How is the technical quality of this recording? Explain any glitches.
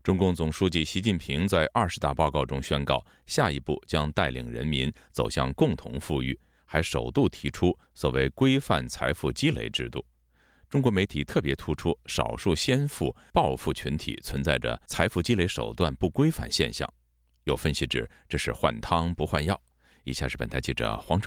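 No technical faults or glitches can be heard anywhere in the recording.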